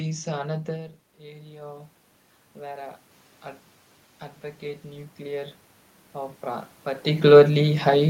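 In this speech clip, voice and room noise swell together from 1.19 to 2.01 s and again, more slowly, from 4.6 to 7.33 s: automatic gain rising, lifting about 4 dB then about 8 dB after the input dropped about 13 dB.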